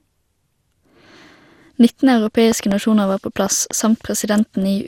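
Throughout the speech there is generation loss. The sound is swirly, smeared and hollow, consonant attacks are blurred, and nothing is present above 16.7 kHz. This is most likely the result of around ten successive lossy decode and re-encode passes, which fits repeated MP2 coding at around 96 kbit/s. Each pass requantises the audio on a shifted frame grid, so quantisation noise and spectral holes accumulate beyond what a single encode at that rate would produce.

From 2.52 to 2.74 s there is a loud pop: two sharp clicks in quick succession, peaking at about 10 dB above the speech, just before "var på". The speech continues underneath. From 3.46 to 3.73 s, just after "var på", a second double pop occurs at about 5 dB above the signal. Both events are likely voltage transients from a plug, switch, static discharge or driver glitch, with the downstream circuitry shaping each pulse.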